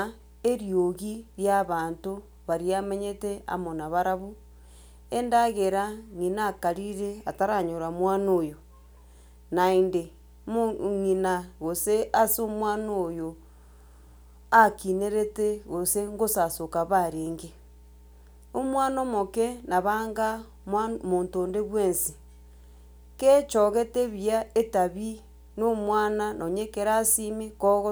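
Mains hum runs under the speech from start to finish: a steady 60 Hz tone with some low harmonics, sitting roughly 25 dB below the speech. A ground loop or nearby transformer has coupled the power line into the signal path.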